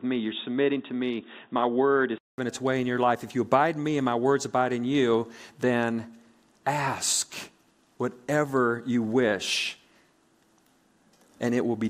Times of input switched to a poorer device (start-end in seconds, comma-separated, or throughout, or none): 0.00-2.38